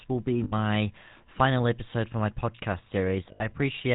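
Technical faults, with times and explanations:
throughout: GSM full-rate codec. The speech was squeezed through a coder that models the vocal tract, drives it with sparse, evenly spaced pulses, and discards everything above 4 kHz, which fits the 13 kbps full-rate coder. The result is a plainly audible buzzy, gravelly roughness and a dull, band-limited top.
0.44–0.53 s and 3.32–3.43 s: lost GSM frames. Right after "will be" and again after "episode for my podcast", about 80 ms of data went missing each time, which points to four consecutive 20 ms frames. The decoder repeated the last good frame, leaving a brief rough, metallic ring.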